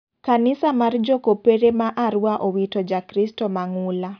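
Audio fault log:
No faults detected in this speech.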